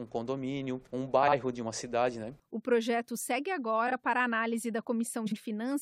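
At 1.23–1.33 s, 3.87–3.93 s and 5.26–5.37 s, frames out of order: adjacent blocks of about 46 ms, 23 ms and 46 ms play swapped, giving a brief garbled flutter, and no time lost.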